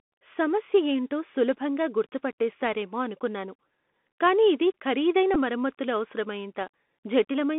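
The speech passes through the Bluetooth CVSD headset codec on a narrowband 200 Hz–3.5 kHz line, and its one-bit step coding turns sibilants scratchy over a granular hiss. From 5.34 to 5.37 s, just after "కానీ ఇది ఖరీదైన", a Bluetooth headset packet is repeated. Lost data, about 11 ms or roughly three packets, is replaced with the previous packet, leaving a brief buzzy stutter.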